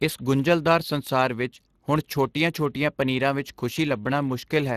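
From start to finish the speech carries Speex codec damage, and it's plainly audible. Speex is a CELP coder built for old VoIP and game chat. It rebuilds the voice from a predicted spectral shape plus a coded excitation signal, so when that excitation is starved of bits the speech picks up a grainy, hoarse edge. Here the damage fits a rate of around 22 kbps, and there's nothing at all above 15.3 kHz.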